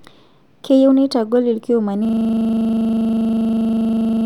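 A system hang loop begins at 2.05 s and runs to the end of the clip. At that point the playback system stopped supplying new audio while the sound hardware kept replaying whatever sat in its ring buffer. A 40 ms slice of speech repeats exactly, over and over, 55 times. With a period that short, the repetitions fuse into a steady, rough buzz at 25 Hz in place of the continuing speech.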